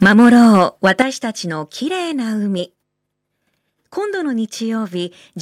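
From 0.02 s to 1.02 s, the speech has microphone overload. The loudest syllables sound harsh and crackly, with their peaks flattened. The input was likely set too high, pushing peaks about 5 dB past the converter's limit. Their tops are sliced off. Around 4 percent of the samples in this stretch are cut flat. That squared-off waveform adds the gritty edge.

At 0.03 s, the microphone volume stepped down by about 4 dB. Voice and background drop together in a single step. The call software likely saw the clipping and reduced the device's input volume. The distortion carries on after this first cut. The reduction was not enough to clear the overload.

At 1.02 s, the microphone volume stepped down again, this time by about 10 dB. The level falls sharply once more, and the crackle stops here. This larger cut brings the peaks back under the limit.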